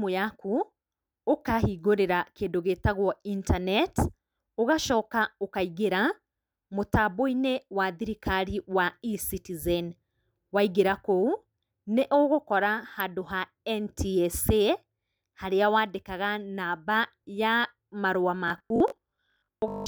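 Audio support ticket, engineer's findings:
Robotic sound from repeated short buffers, 18.48–19.86 s. Rigid 50 Hz buzz. Likely starved buffer looping 20 ms chunks; about half the audio is repeats.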